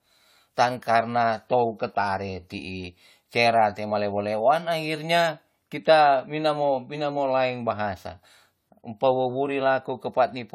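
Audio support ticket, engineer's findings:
Generation loss, throughout the clip. Swirly, smeared, hollow speech, blurred consonant onsets, worse than one lossy pass would give. Likely cause: repeated decode/re-encode, around seven passes, consistent with an AAC-LC chain near 96 kbit/s. Each pass requantises on a shifted frame grid, stacking noise and spectral holes. Band empty above 18.1 kHz.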